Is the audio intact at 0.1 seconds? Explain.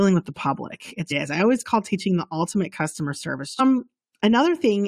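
Yes, the speech at 0.1 seconds plays through intact, with no dropout, click, distortion or other fault at that moment.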